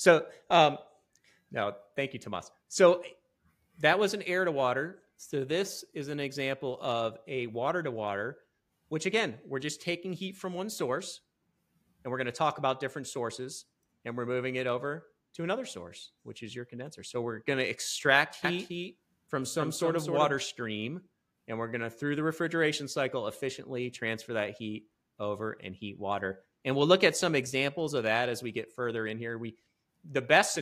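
From 18.45 s to 20.35 s, a doubled audio track appears: a second, full-band copy of the sound trails the original by roughly a third of a second, a few dB quieter. It is likely caused by the signal being captured again through a slower path. Unlike an echo or reverb, the copy has no decay, no repeats and no room colour, and it switches on and off abruptly at those two points.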